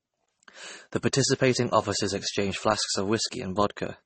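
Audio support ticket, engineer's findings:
Throughout: smeared, swirly speech with layered compression artefacts and nothing above 8.4 kHz. Spectrogram shows a hard flat ceiling and patchy high bands. Likely transcoding between lossy codecs, consistent with roughly 32 kbit/s AAC into 32 kbit/s MP3, artefacts compounding.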